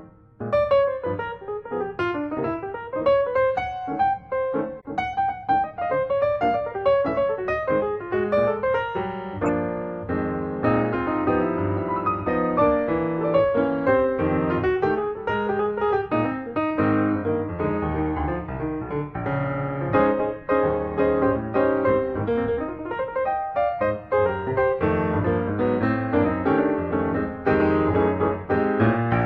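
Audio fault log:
4.80–4.86 s, corrupt frame decoded: a faint, brief blip. Flipped bits in a compressed frame were decoded anyway, so misread gains and codes put energy at the wrong frequencies for the span of a few frames.
9.43–9.49 s, corrupt frame decoded: a much louder squeak or noise burst. The same decoder error, with the damaged data producing stronger misplaced energy across a couple of frames.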